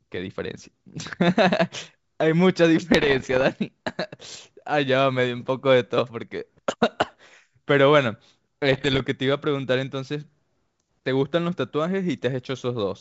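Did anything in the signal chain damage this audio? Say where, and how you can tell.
Yes. Bit errors on the ADPCM link upset the decoder's step size and predictor, causing pops and rough, level-jumping bursts at 2.92–3.43 s and 8.72–9.02 s.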